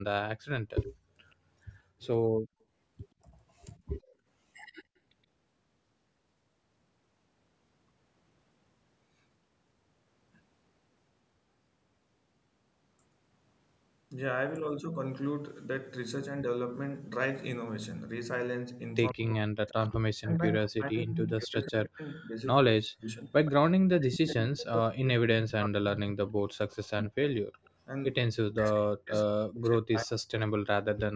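At 0.82 s a faint copy of the sound returns 123 ms late, likely an echo leak through a speakerphone's canceller. It is a distinct repeat, not a level change. Background gated by the echo canceller follows at 1.02 to 1.08 s (about 20 dB) and 4.03 to 4.25 s (about 30 dB): the room tone drops out briefly. From 19.13 s to the end, speech suppressed in double talk, likely from both sides talking at once, makes the voice dip by as much as 40 dB or cut out for about seven seconds in total. Unlike gating, this strikes the talker, not just the room. The 123 ms echo returns faintly at 19.1 to 19.71 s, more strongly at 23.46 to 23.52 s, and faintly again at 26.71 to 28.36 s. Within that last stretch, the room tone gates again at 27.52 to 27.64 s, by about 33 dB.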